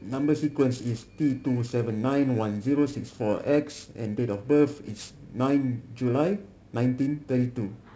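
Throughout the speech, periodic clock jitter gives a rough, metallic edge, as the converter's clock wobbles at around 2 kHz. A spectrogram shows sideband copies of each harmonic, offset about 2 kHz above and below, strongest at high frequencies and absent in pauses.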